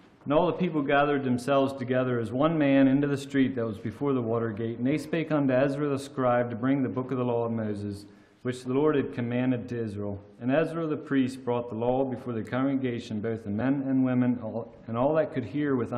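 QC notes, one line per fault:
13.60 s, damaged data in a compressed stream: a brief glitch lasting a fraction of a blink, near the end of the clip. A patch of the coded stream is corrupted, so the decoder garbles that frame, loses its footing, hunts for the next valid header and carries on from there.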